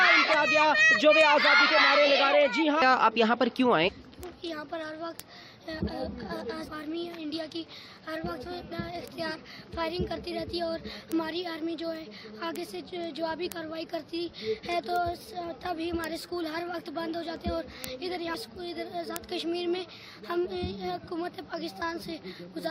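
Word clock ticks run through the audio from 0.22 s to 22.65 s, about every tenth of a second. The receiving clock drifts roughly 150 ppm against the sender, so one sample is dropped or repeated at each slip. Damaged data in a compressed stream produces brief glitches at 0.33–0.35 s, 3.87–3.89 s, 6.66–6.69 s and 8.71 s, where the decoder misreads corrupted frames and resyncs.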